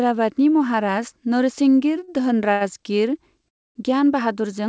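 At 2.04 to 2.23 s and again at 2.53 to 2.63 s there is a short stall from a late packet. Each time a packet arrived too late, the jitter buffer ran dry, and the receiver stretched the last sound to cover the wait, about 30 ms the first time and 79 ms the second, before resuming at the same point. Nothing is lost, but a syllable is held unnaturally long with a faint buzz. On a spectrogram the harmonics run flat and smeared for that span, with a slight dip in the waveform envelope.

From 3.49 to 3.77 s the speech hits a call audio freeze, likely caused by packets held up in transit. The receiver covered 268 ms, first by continuing the last sound as a brief fading buzz and then with about 260 ms of near silence, before the audio picks up where it stopped. The waveform collapses to a flat line, and the spectrogram shows a blank vertical band with a thin smear at its leading edge. Throughout the clip the call path leaves nothing above 8 kHz, which fits a wideband call codec such as G.722.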